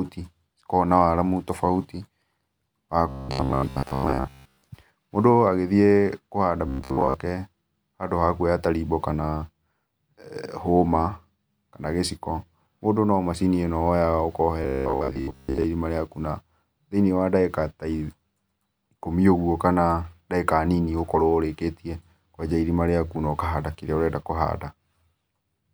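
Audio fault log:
3.09–4.68 s, 6.68–7.14 s (right after "agĩthĩe kũhanda") and 14.63–15.65 s: robotic sound from repeated short buffers. The speech collapses into a hard, metallic buzz at about 66.7 Hz that still roughly traces the syllables. That pitch fits a 15 ms chunk being looped over and over, likely because fresh audio was arriving too late. Something like two-thirds or more of the real speech gets skipped in those stretches.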